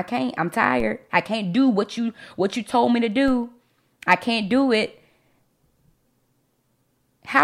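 A speech recording with two DC steps, at 0.80 s and 3.28 s. At each, the waveform's zero line jumps abruptly by about -22 dBFS and then drifts back, decaying at a rate that fits a high-pass near 5 Hz. Each step is heard as a low thump while the speech continues unchanged. On a waveform the whole trace lifts off centre and slowly sinks back; a spectrogram shows a brief broadband vertical line with low-frequency energy.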